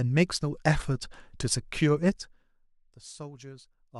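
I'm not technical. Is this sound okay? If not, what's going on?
No. From 2.07 to 2.58 s there is zipper noise: the volume drops sharply in small jumps, about twenty a second, and each jump adds a faint tick to the speech.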